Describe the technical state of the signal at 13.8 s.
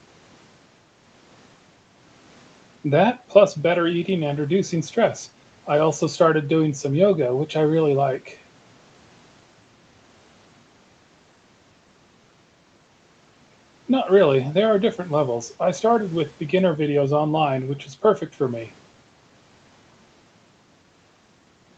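At 13.8 s the speech is intact, with nothing more than the usual call microphone processing: the lowest bass is trimmed and nothing sits above 8 kHz.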